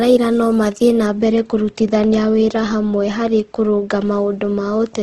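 Throughout the speech, the sound is rough and grainy, with noisy texture where clean detail should be and nothing above 12.1 kHz. This is likely Opus compression in its CELT mode filling starved bands with noise, which fits a bitrate near 16 kbps.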